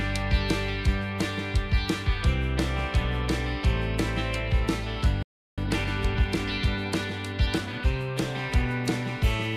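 The player most likely ran short of data or had its output thread blocked, producing a playback stall from 5.23 to 5.58 s. The audio stops abruptly mid-flow and stays silent for about 348 ms, then resumes. Once output restarts, the player works through the backlog it accumulated during the gap by trimming small slices and cross-fading across each cut. That time-compressed catch-up runs from 5.58 to 7.90 s at 1.15 times normal speed, so the sound is hurried while its pitch stays where it was, until the player is back in step at normal pace.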